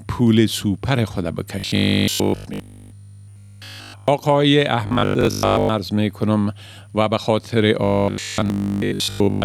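New audio likely arrived too seldom, so roughly 20 ms buffers were replayed in place of missing sound. The result is robotic sound from repeated short buffers, a rigid 50 Hz metallic buzz. From 1.60 to 4.08 s it replaces essentially everything, and from 4.87 to 5.69 s and 7.84 to 9.44 s it replaces most of the sound.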